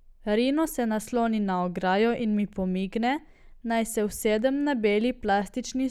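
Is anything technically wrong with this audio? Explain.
No, nothing is technically wrong with this audio.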